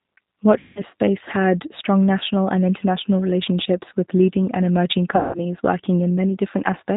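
Throughout the speech, the sound carries the signature of the G.729 codec, and the slightly rough, synthetic texture points to its 8 kbit/s G.729A form. Each 10 ms frame is rebuilt from a vocal tract filter, a pitch predictor and a few pulses rather than the real waveform, so the damage is plainly audible. On a spectrogram, nothing appears above 4 kHz, and harmonics look smeared and grainy instead of clean.

From 0.59 to 0.83 s, VoIP packet loss concealed by the speech codec takes over. The decoder extends its last pitch and filter shape, so the speech is stretched into a buzzy tone or coloured noise that fades. The gap fits about 17 lost 10 ms frames. A spectrogram shows the last spectrum held and dimming frame by frame, and the waveform shrinks in amplitude. The speech stays weak or distorted for a while after it returns. The same concealment recurs from 5.16 to 5.38 s, a span fitting about 18 lost frames, and it looks the same on a spectrogram.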